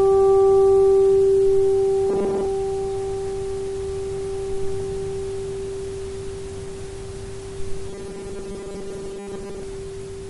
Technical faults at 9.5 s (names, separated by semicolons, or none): robotic sound from repeated short buffers